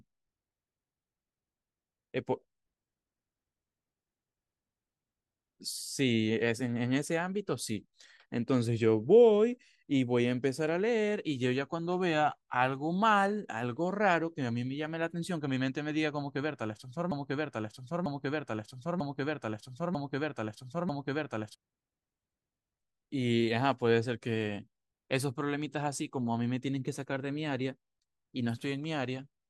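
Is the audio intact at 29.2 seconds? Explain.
Yes, the audio is intact at 29.2 seconds, with no fault audible at that moment.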